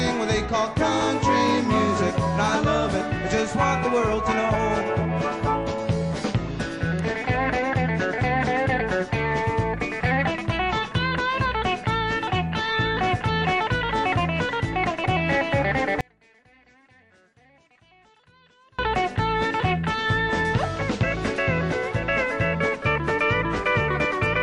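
From 16.01 to 18.79 s the sound collapses to a faint residue, dropping by about 34 dB before recovering abruptly. This is likely one channel inverted: with one side's polarity reversed, everything shared between left and right cancels in the mono sum, and only their small differences survive. On a waveform the envelope shrinks to a thin sliver for those 2.8 seconds. On a spectrogram the band turns pale.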